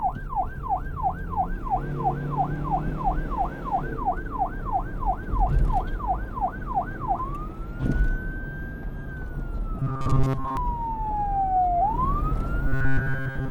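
Robotic sound from repeated short buffers at 9.80 to 10.57 s and 12.68 to 13.50 s: a rigid metallic buzz at 134 Hz, likely from looping an 7.5 ms fragment while most incoming audio is skipped.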